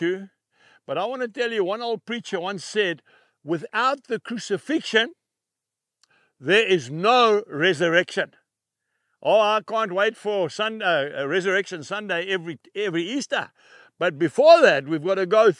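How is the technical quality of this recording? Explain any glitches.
No glitches or faults are audible.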